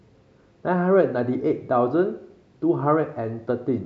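No faults are audible anywhere in the speech recording.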